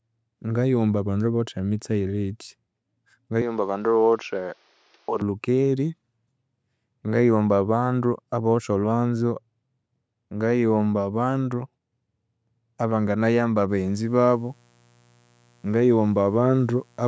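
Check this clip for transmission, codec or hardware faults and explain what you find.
Two faults stand out: a brief change of input device early on, and a mains buzz at the end.

From 3.42 to 5.21 s the sound turns duller and about 5 dB quieter, with a faint new noise floor, then clears again. It switches without any gap. This is most likely an input switched to a poorer device. Unlike a filter sweep or codec dropout, tone, level and background all change together.

From 13.66 s to the end, a steady, raspy, low-level buzz sits under the sound. This is mains buzz at 60 Hz. Switching spikes from a dimmer, rectifier or poor shielding add harmonics far above the fundamental, so it sounds rough rather than like a pure hum. The clip's normal call-processing limit at 8 kHz does not remove it.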